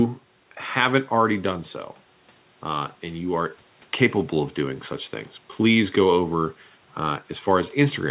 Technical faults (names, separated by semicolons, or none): none